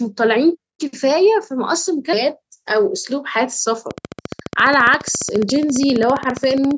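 From 3.91 s to 6.72 s a train of clicks runs over the speech, about forty similar pulses at a steady 14.6 per second, peaking roughly 5 dB above the speech. The ticking also continues through pauses, likely interference or a faulty connection or power supply.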